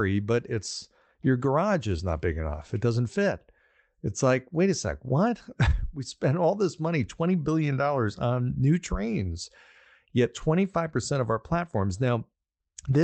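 Clock drift between sender and receiver runs through the whole clip: the sending side's clock runs roughly 4 percent slow relative to the receiver, so the jitter buffer keeps draining and the receiver has to fill the gap. Unlike packet loss, which leaves scattered gaps and concealment smears, this shortfall is steady and one-directional. The speech arrives a little too slowly the entire time.

The repeated timing corrections, from 0.10 s to 13.02 s, are the receiver's response. It keeps repeating short pieces to stretch the audio, so the speech plays back at about 97 percent of its natural pace and gains roughly half a second over the clip. The edits are unevenly spaced and small, heard if at all as slight hiccups or an unsteady tempo rather than a smooth slowdown. Pitch does not drop as it would with a wrong sample rate, which separates this from a resampling error. These corrections sit on top of the Opus call path, whose band limit near 8 kHz and usual coding noise run throughout.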